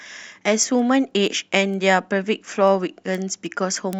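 From 0.17 to 3.93 s, word clock ticks recur about every 0.15 s. An unlocked receiver clock, roughly 150 ppm off, drops or repeats single samples, producing sharp clicks. These show as thin vertical spectrogram lines and waveform discontinuities.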